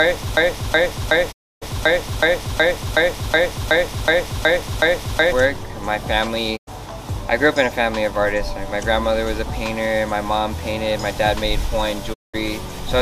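From the very start until 5.32 s, a broken-record loop is already under way: a 0.37 s fragment repeats exactly, thirteen times back to back. A stalled player or stream likely kept resending its last fragment, losing the real audio. The waveform shows identical blocks tiling at a fixed period.

Digital broadcast dropouts follow at 1.31 to 1.64 s (inside the loop), 6.56 to 6.69 s and 12.12 to 12.36 s. Each time, the receiver muted after losing good frames, fading out over about 20 ms. On a spectrogram, each looks like a blank vertical band with soft edges.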